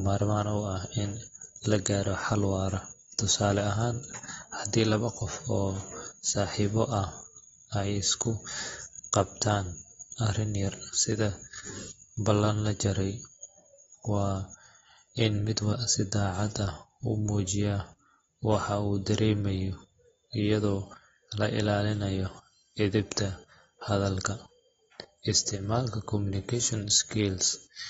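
From the start and all the way through, the speech sounds dull and smeared, with nothing above about 7.7 kHz. Sibilants come out fizzy and sustained sounds pick up a warble. The likely cause is heavy AAC compression, probably AAC-LC, at a bitrate low enough to sound like something around 24 kbps. The encoder pulled its cut-off down and coarsely quantised what was left, so the missing top end and the swirly texture are easy to hear.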